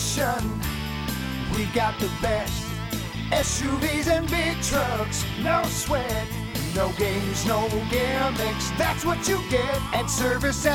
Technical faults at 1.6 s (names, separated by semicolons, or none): none